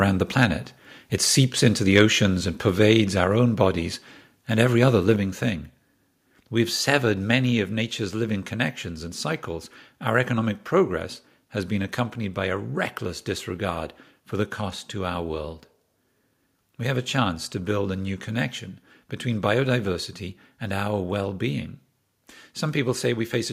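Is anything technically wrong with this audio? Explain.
Yes, there are two problems. From 1.95 to 2.01 s there's microphone overload: the speech goes harsh and crackly for a moment, about 3 dB past the ceiling. The input level was likely set too hot, so a small share of the loudest peaks got their tops flattened at the converter.

Then the microphone volume gets stepped down three times, at 3.24 s and 5.16 s by about 3 dB, and at 7.35 s by about 2 dB. Voice and background both drop abruptly at each point, which sounds like the call software trimming input gain after that distorted peak.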